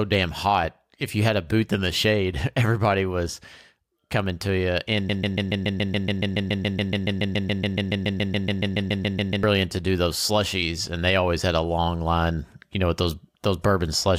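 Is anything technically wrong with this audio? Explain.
Yes, there's a broken-record loop in this speech from about 5.09 s to 9.43 s. A tiny slice of sound, roughly 141 ms long, repeats back to back 31 times, so you get a rapid stutter that just hangs there for over four seconds. The likely cause is the player or stream stalling and resending the last fragment it had buffered. Whatever should have played during that stretch is simply gone.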